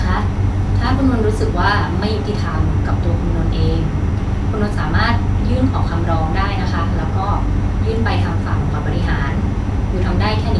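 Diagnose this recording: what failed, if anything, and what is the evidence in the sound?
Nothing failed: no stage of the chain leaves any audible fault in this speech recording.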